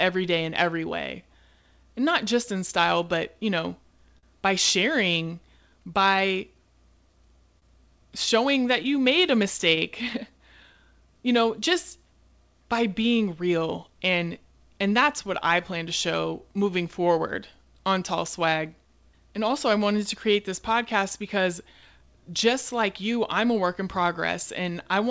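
Speech carried over a call path, with its spectrum ending sharply at 8 kHz, which fits a wideband codec such as G.722. The first fault is clock drift between sender and receiver that runs through the whole clip: the sender's clock runs slow by roughly 3 percent, so the receiver's jitter buffer keeps draining. On a waveform this appears as a delivery that never quite holds a steady pace. There is no single visible event, only a slight, persistent drag.

To cope with the drift, the receiver makes repeated timing corrections from 0.04 s to 24.85 s. It stretches the sound in small steps until playback runs at about 97 percent speed and around 0.7 s of extra material has been added. Each edit is tiny and unevenly spaced. On a spectrogram they show as faintly lengthened harmonics and smeared onsets.

There are two short stalls from late packets, at 4.18 to 4.25 s and at 7.59 to 7.64 s. Each time the buffer ran empty, and the receiver held the last sound for 45 ms and then 26 ms until the packet arrived. 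Nothing is lost. A spectrogram shows flat, frozen harmonic bands at those points, and the waveform repeats a periodic cycle with a slight dip, heard as a brief buzzy hold.

Between 8.58 and 10.16 s there are scattered short gaps, roughly five of them, each patched by continuing the previous sound. The longest lasts around 15 ms, and about 3 percent of that stretch is concealed. On the waveform these appear as small discontinuities. On a spectrogram they are thin vertical seams or smears, heard as faint ticks and hiccups.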